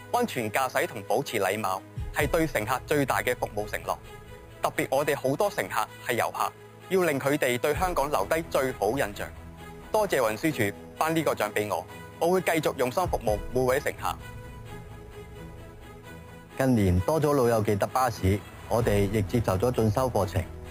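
From start to finish a bright metallic fizz rides on the sound, rising and falling with its level, about 18 dB below it. This is imaging from sample-and-hold upsampling: samples were simply repeated without smoothing, which points to an 11 kHz rate raised to 44.1 kHz, mirroring the spectrum into the 5.5 to 11 kHz band.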